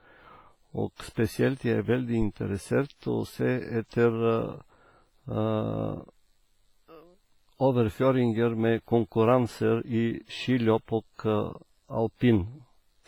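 The whole clip carries heavy transform-codec damage, likely from WMA compression at a low bitrate, consistent with about 24 kbps. Long blocks smear quantisation noise over tens of milliseconds and zero out weak spectral lines, so the speech rings and sounds washy, with hiss breathing alongside it.

From 0.96 to 1.00 s there is pre-echo. A sharp attack landed late in a codec block, and noise sized for that loud moment filled the quiet lead-in, about 31 ms ahead of it. The result is a brief hiss before the onset, which itself sounds softened and smeared.

From 2.22 to 2.33 s a phantom power thump appears. A supply switched on or off on a live input sent a voltage step through the coupling capacitors, producing a deep low-frequency thump that dies away quickly, decaying over about 25 ms.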